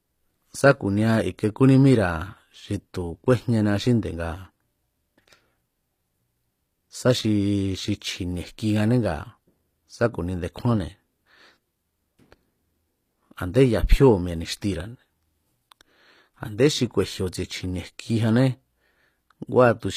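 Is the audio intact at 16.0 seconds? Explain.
No. HE-AAC compression damage is plainly audible at 16.0 s, as it is across the whole clip. The likely cause is a codec that keeps only the lower spectrum and synthesises the treble by copying lower bands upward under a coarse envelope, at a rate that fits about 24 kbps. The rebuilt highs do not align harmonically with the speech below, so s sounds come out gritty and metallic.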